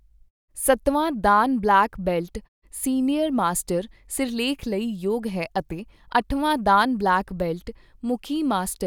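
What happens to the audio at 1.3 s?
At 1.3 s the speech plays through intact, with no dropout, distortion or other fault.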